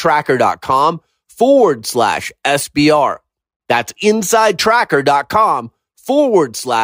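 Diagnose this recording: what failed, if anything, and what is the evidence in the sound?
Nothing in this speech recording points to a failure at any stage, so there's nothing here to diagnose.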